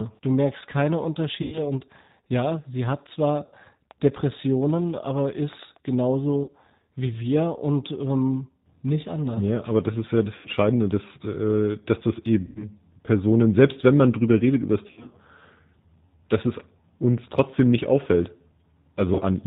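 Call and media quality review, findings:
G.729 codec, throughout. Band-limited speech, nothing above 4 kHz. Slightly rough, synthetic texture. Codec damage plainly audible. Sound fits G.729A at 8 kbit/s. The speech is rebuilt from a vocal tract filter, a pitch predictor and a few pulses per 10 ms frame. Fine detail of the waveform is discarded.

VoIP packet loss concealed by the speech codec, seven events. Stretched buzzy tone or coloured noise fading out, then weak, smeared speech while the decoder recovers. Decoder extrapolates last pitch and filter with falling gain. Times: 1.42–1.63 s (100 ms lost). 3.46–3.55 s (60 ms). 6.44–6.51 s (40 ms). 10.37–10.48 s (80 ms), after "das ist ja das", before "dass äh dass das". 12.41–12.69 s (140 ms), after "dass äh dass das". 14.87–15.14 s, after "drüber redet über das": 160 ms lost, scattered over 240 ms, longest gap 60 ms. 19.15–19.23 s (40 ms).

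Train of clicks, 3.91–5.77 s. About ten similar ticks, irregular spacing, about 4.9 per second. Peaks roughly level with the speech. Audible over the speech and in pauses. Likely interference from nearby equipment or a faulty connection or power supply injecting repeated pulses.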